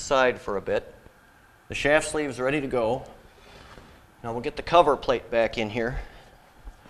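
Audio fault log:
No fault is logged for this clip.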